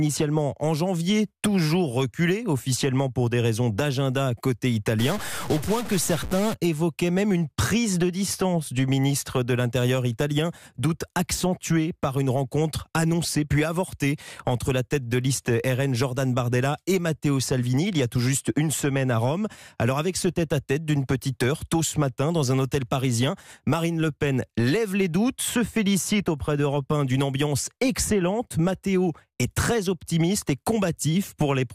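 From 4.99 to 6.54 s the sound turns harsh and buzzy, with a gritty noise that persists through the quietest moments. This is stuck bit distortion. The likely cause is one data bit held at a fixed value by a faulty line or converter, which knocks roughly half the samples off by a step of around -30 dBFS. Unlike clipping, which only bites on loud peaks, this damage stays audible at low levels and in gaps.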